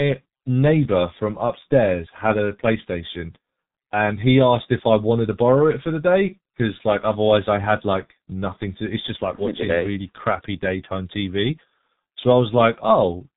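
From start to finish the speech sounds muffled and hoarse, with smeared consonants and nothing above 4 kHz, the mark of the G.723.1 codec squeezing it to 6.3 kbit/s. At 9.35 s to 9.44 s a short, fading patch appears where VoIP packet loss was concealed by the speech codec, which filled one missing 30 ms frame by extending its last pitch and filter.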